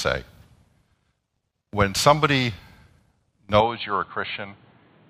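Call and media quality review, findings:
Speech dull, boxy from 3.60 s onward, cut above 4.4 kHz, about 5 dB quieter, new background noise; likely input switched to a poorer, narrower-band device, no gap.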